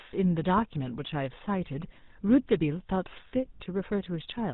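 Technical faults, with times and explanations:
Throughout, GSM full-rate codec: the whole thing's band-limited below 4 kHz with a buzzy, gravelly edge, plainly audible, consistent with a 13 kbps pulse-excited vocal-tract model.
3.28 to 3.31 s, lost GSM frame: a brief metallic ring where one 20 ms frame dropped and the previous frame's settings got replayed.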